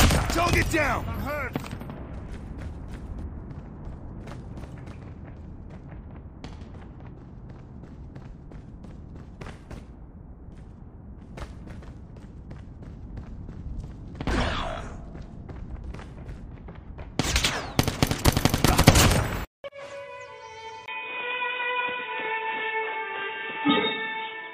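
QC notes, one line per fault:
20.86–24.54 s, input switched to a poorer device: after a brief gap of about 20 ms at 20.86 s, the sound turns dull and boxy, with nothing above 3.8 kHz. The level shifts by roughly 5 dB, and a new background noise sits around 35 dB below the signal. The likely cause is the recording input moving to a different, narrower-band microphone or headset profile, whose own response, gain and noise floor replace the original's.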